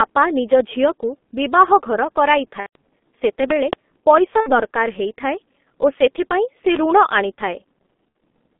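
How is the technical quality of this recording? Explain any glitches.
Quality's pretty rough, honestly. It's heavy low-bitrate phone audio with a few dropouts and a pop.

Throughout, the G.723.1 codec at about 6.3 kbit/s squeezes speech into a 200 Hz to 3.5 kHz band, so it sounds muffled and hoarse, with smeared consonants.

VoIP packet loss concealed by the speech codec hits at 2.60 to 2.76 s (about 150 ms, which fits five 30 ms frames), at 4.40 to 4.60 s, and at 8.09 to 8.15 s. Each time the decoder stretches its last sound into a fading buzz or coloured noise.

At 3.51 to 3.75 s there's a loud pop, two sharp clicks roughly 20 dB above the speech, likely from a plug, switch or static spike.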